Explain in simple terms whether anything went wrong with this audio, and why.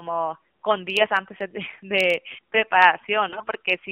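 AMR narrowband mobile codec, throughout the whole clip: the speech has passed through the kind of voice compression used on older 2G and 3G phone calls. Instead of sending the sound itself, it sends a rough model of the throat and mouth plus a few pulses to drive it. Only the band from about 150 Hz to 3.5 kHz survives, so the voice sounds thin and boxy. At the low setting used here it also sounds plainly buzzy and synthetic.

AMR bit errors, from 3.28 to 3.52 s: near the end, the speech turns hoarse, scratchy and gargly for about a quarter of a second. A weak radio link flipped some of the less-protected bits in those compressed packets. The packets' safety check only covers the most important bits, so it still passed, and the damaged data was decoded anyway. The driving pulses and fine details landed wrong, while the pitch and loudness stayed roughly the same.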